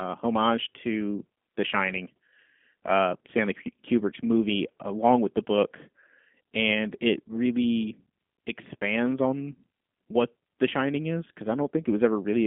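Speech passed through a G.729 codec, and the damage is plainly audible throughout, which fits an 8 kbit/s G.729A stream. Rebuilding the voice from a vocal tract model and sparse pulses leaves it rough and synthetic, confined to roughly 200 Hz to 3.5 kHz, with nothing above 3.7 kHz.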